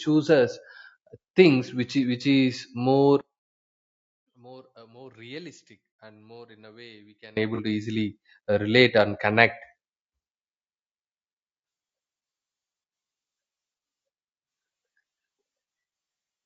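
A low-bitrate, low-delay codec, likely AAC-ELD at around 32 kbps, coarsens the speech throughout, leaving it grainy and rough with noise between the harmonics.

From 3.21 to 7.37 s, one channel inverted, likely a polarity flip, cancels the shared centre in mono, dropping the speech by about 25 dB to a faint residue.

At 7.55 to 7.60 s, AAC frame loss with concealment fills a gap of about 30 ms, consistent with a single lost frame, leaving a brief smeared, noisy patch just before "to easily uh relate".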